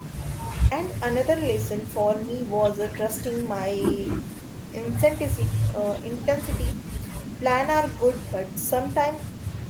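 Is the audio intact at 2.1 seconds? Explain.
Yes, at 2.1 seconds the audio is intact, with no fault audible at that moment.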